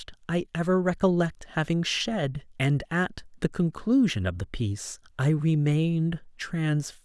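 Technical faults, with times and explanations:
Nothing stood out on listening to this speech recording.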